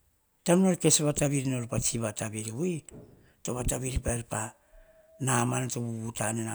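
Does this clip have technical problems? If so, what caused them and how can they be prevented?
Yes. Loud pops, two in quick succession from 3.96 to 4.11 s and one at 5.39 to 5.42 s, jump well above the speech, likely from an electrical pulse such as a switch, plug or static discharge. Securing connections and avoiding switching or handling equipment while recording prevents this.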